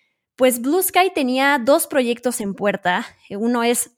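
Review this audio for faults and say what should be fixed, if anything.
No faults; nothing to fix.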